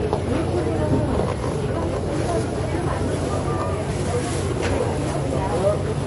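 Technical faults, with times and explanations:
Throughout, transcoding between lossy codecs: nothing is present above 11.2 kHz, and two different kinds of compression artefact sit on top of each other and are heard together. This is likely the result of a low-rate MP3 stage followed by a WMA re-encode. The second encoder spent its bits reproducing the first one's damage and added its own. A single codec pass would leave only one recognisable artefact signature.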